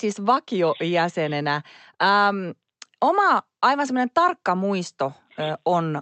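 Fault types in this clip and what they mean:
No faults detected.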